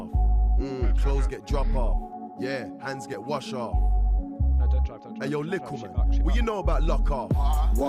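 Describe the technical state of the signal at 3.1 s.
At 3.14 s there is a repeated buffer. New audio did not reach the output in time, so the device played its last block a second time. That block is only about 1.33 ms long, which fits a 64-sample buffer. The piece sounds twice, with a hard join where the repeat begins. At this tiny size it is heard as a click or brief buzz, not a stutter. Essentially no audio is lost.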